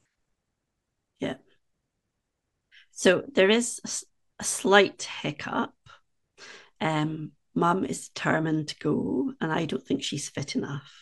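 A speech recording with sample clock jitter all the way through: the converter's timing wobbles by around a microsecond, so each sample lands slightly off. That adds a faint hiss, roughly 40 dB under the voice, which gets grittier on loud, bright sounds and disappears in pauses.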